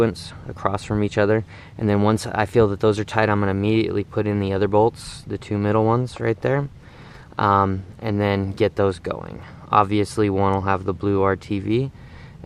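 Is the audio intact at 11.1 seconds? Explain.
Yes, at 11.1 s the audio plays through cleanly, with no dropout, click, distortion or other fault to be heard.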